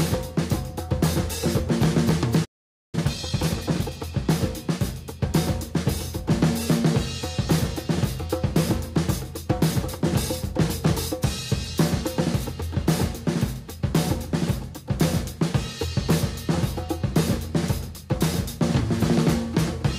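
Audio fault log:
2.44–2.95 s, playback stall: the audio stops mid-flow and the output falls silent for about 485 ms before resuming. The likely cause is the player running short of buffered data, or its output thread being blocked, so nothing reached the output until it recovered.
2.95–3.91 s, time-compressed catch-up: straight after the gap the audio runs hurried at about 1.5 times normal speed while keeping its pitch. The player trims its backlog by dropping small slices and cross-fading the joins.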